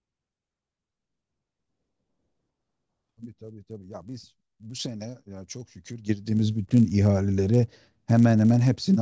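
Throughout the speech runs a 100 Hz buzz: the resampler restarted on every block, converting 24 kHz to 16 kHz in 10 ms chunks with no carried-over history, so each block edge adds a small error. Unlike mains hum, it vanishes in pauses.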